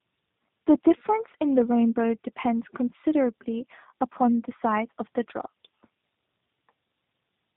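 Throughout, tandem speech coding, likely AMR-NB then G.729A, leaves the speech rough, muffled and warbly; a spectrogram shows nothing above 3.8 kHz.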